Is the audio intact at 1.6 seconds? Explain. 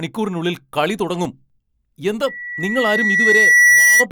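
No. At 1.6 seconds the speech is inside a run of five brief ticks and tiny dropouts, from 0.75 to 1.74 s, each lasting only a few milliseconds. These are CD scratch ticks: a scratch ruins more data than error correction can repair on each disc rotation, so the player fills or mutes those samples.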